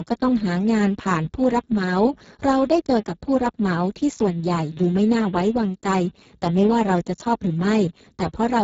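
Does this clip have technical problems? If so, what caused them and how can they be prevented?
Yes: heavy Speex codec damage throughout makes the speech noisy and hoarse, fitting a bitrate near 6 kbps; a spectrogram shows nothing above 7.6 kHz. Prevent it with a higher-bitrate or modern codec such as Opus.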